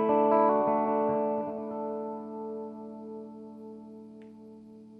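No technical fault can be heard anywhere in the audio. Nothing in the sound calls for a timestamp or a cause.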